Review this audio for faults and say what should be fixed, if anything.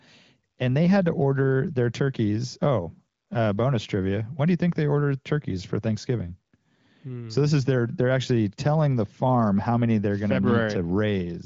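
Nothing here needs fixing: it's speech through the AMR wideband (HD Voice) codec at 18.25 kbit/s, with the top end stopping around 7.5 kHz as that path does, and no faults turn up anywhere.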